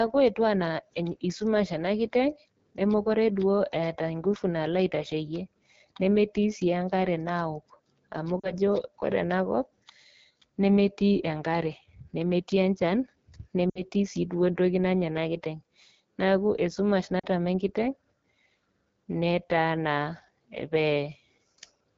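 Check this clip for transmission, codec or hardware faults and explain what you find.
Two kinds of fault here: the whole clip has been through a low-rate wideband phone codec, and there are three short dropouts from lost speech frames.

AMR wideband (HD Voice) codec, throughout: the speech has a clearly rough, raspy edge, which fits the 8.85 kbit/s mode of AMR-WB, one of its lowest rates. At that rate the codec models the vocal tract and pulse excitation too coarsely to stay clean. Above about 6.4 kHz the top band is just shaped noise.

Lost AMR speech frames, at 8.39–8.54 s, 13.70–13.82 s and 17.19–17.26 s: each drops to near silence, roughly 40 ms, 60 ms and 40 ms of missing audio, which fits a few 20 ms frames failing their checksum over the radio link. The decoder covers the gap by repeating the last good pitch and vocal tract settings with falling gain. Because this is wideband, the concealment fades quickly, and the speech comes back weak or rough for an instant.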